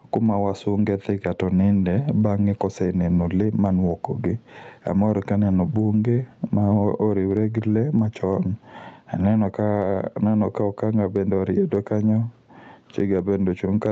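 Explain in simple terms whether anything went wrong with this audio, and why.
Gain pumping runs through the whole recording, from start to finish. The level seems to breathe in and out by a large amount. This likely comes from the microphone gain being set far too high, with an automatic limiter pulling it back down on every loud moment. Loud and quiet parts end up squeezed together, which makes the sound feel flattened and crowded. The call's own processing, which removes everything above about 8 kHz, is normal and not part of the problem.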